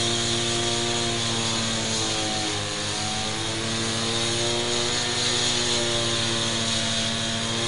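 Throughout, an unshielded or switching-noise path lets mains buzz at 50 Hz into the signal, a steady raspy drone of spiky harmonics only about 10 dB below the sound. Heavy MP3 compression is the likely cause of the plainly audible damage from start to finish: nothing survives above 10.6 kHz, fitting a bitrate near 48 kbps, and detail swirls watery with smeared attacks.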